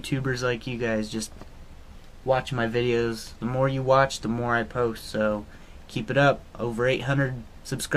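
Nothing stood out as a technical problem on listening to this audio.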